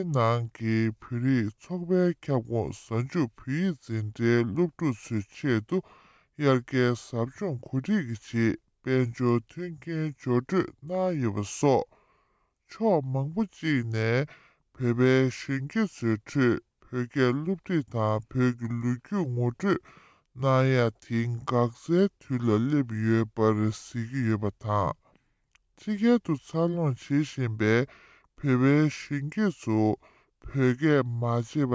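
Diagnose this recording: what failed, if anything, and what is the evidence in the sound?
The whole recording runs slow and sits low: everything plays at about 0.73 times normal speed, with pitch dropped by about 5.5 semitones. Because speed and pitch fall together by the same ratio, this is a wrong sample rate fault at the playback stage. The samples are clocked out without conversion at a slower rate than they were captured at, which fits material recorded at 22 kHz being played at 16 kHz.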